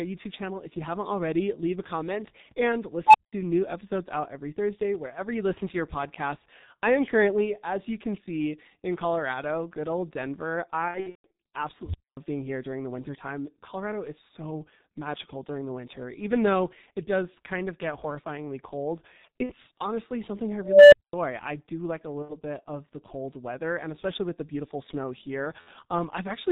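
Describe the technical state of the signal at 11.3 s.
At 11.3 s you're right at the tail of a burst of VoIP packet loss concealed by the speech codec, running from 10.88 to 11.33 s. Roughly 300 ms went missing across about 420 ms, which fits ten lost 30 ms frames, with the longest gap about 150 ms. The decoder keeps rebuilding from its last pitch and filter while the gain drops, so the sound smears out and fades, and it stays weak for a moment as packets return.

Underneath that, the whole clip carries heavy G.723.1 codec damage. The muffled, hoarse quality and blurred consonants point to a bitrate around 6.3 kbit/s. Nothing gets through above 4 kHz, and the slowly updated voice model makes everything sound thick and smeared.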